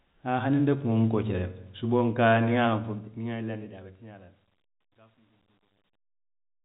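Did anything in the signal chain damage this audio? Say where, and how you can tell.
Yes. The fault is truncation distortion on a fade, at the sample-format conversion or digital gain stage. The fade-out begins around 2.66 s and runs to 6.65 s. From 2.66 s the tail turns grainy. From 3.67 s to the end it is worst. The cause is a stage that keeps too few bits and adds no dither. The quiet waveform collapses into coarse steps, which fits a 10-bit path. The telephone band, capped near 3.9 kHz, sits underneath this.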